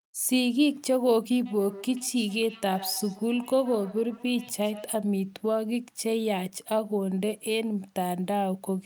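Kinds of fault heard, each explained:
Feedback echo between two devices: another device on the call replays this speech, and the microphone recaptures it beyond its echo canceller's reach. Speech returns roughly every 150 ms, at least about 16 dB down, thinner and ringing. Spectrograms show faint, evenly spaced copies; waveforms show small trailing bursts.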